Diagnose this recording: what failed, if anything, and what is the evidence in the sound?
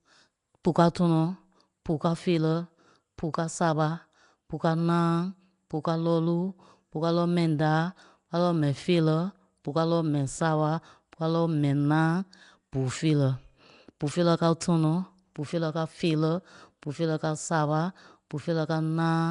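Nellymoser compression, throughout the speech: a rough, hissy halo hangs around the voice, with a smeared, underwater colour, and nothing is present above 10.6 kHz. This is a codec-stage fault, most likely Nellymoser Asao, the old Flash microphone codec, at a rate that fits about 44 kbps. It codes short blocks with a fixed, small bit budget, so weaker bands receive no bits and are replaced with noise. The result is plainly audible damage.

Pre-echo at 0.64 s, just before "káo tɔnɔ", and again at 14.00 s, before "feerɛ káo tɔnɔ": a short hiss of about 10 to 12 ms leads each attack, which sounds softened. This is the same codec stage. The transform spreads quantisation noise evenly across its block, so when a sharp onset lands late in that block, noise sized for the loud part leaks into the quiet instant before it.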